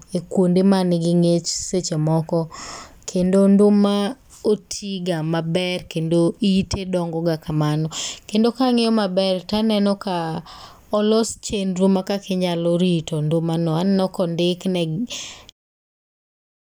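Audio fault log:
No faults turn up in this speech clip, and the only change of note is an ordinary smooth fade out at the very end, starting around 15.5 s and finishing at 15.53 s.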